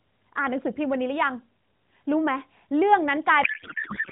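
From 3.44 s to the end of the clip at about 4.11 s, a codec payload misread takes over. The speech becomes garbled noise and warble that barely tracks it. The decoder is reading frames whose bit fields sit in the wrong places, which fits octet-aligned AMR packing being parsed as bandwidth-efficient. On a spectrogram, the harmonic striations and formant bands stop abruptly, replaced by smeared, patchy energy still capped below 4 kHz. In the waveform, the envelope no longer follows syllable rhythm.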